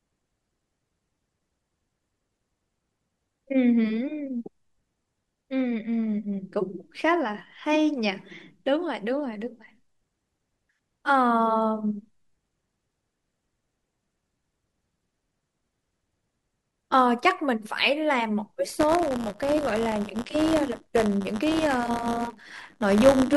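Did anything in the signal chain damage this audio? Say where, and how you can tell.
Yes, buffer tearing at the driver/buffer stage, from 18.69 s to the end. There's a steady robotic buzz at 100 Hz, only while speech is present. Writer and reader have drifted so a sliver of each 10 ms buffer replays audio about 20 ms old.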